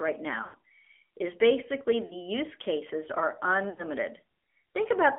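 AMR narrowband mobile codec damage runs through the whole speech recording: the sound is held to roughly 300 Hz to 3.4 kHz, with a buzzy, synthetic texture that fits a low mode around 7.4 kbps. Lost AMR speech frames occur at 0.44–0.56 s, 2.06–2.15 s just before "use cases are", and 3.70–3.82 s just after "use cases are". Each time, the decoder stretches the last good pitch with fading gain for 0.1 s, 0.04 s and 0.08 s respectively, pointing to runs of two to five dropped 20 ms frames.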